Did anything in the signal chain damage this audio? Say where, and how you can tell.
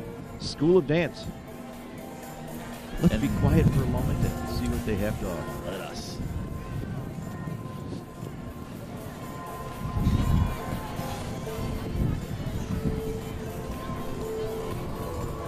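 Yes, at the buffer between converters: clicks every 1.22 s from 1.24 to 14.61 s show as thin vertical spectrogram lines, likely clock drift buffer slips dropping or repeating samples.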